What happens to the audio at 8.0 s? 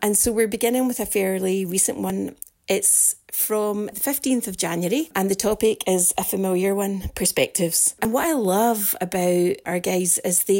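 At 8.05 s, the audio is likely missing between chunks: a recorder working in 3-second blocks drops a sliver of signal at a block boundary. Around 30 ms disappears, and the two sides butt together with no gap, heard as a brief skip.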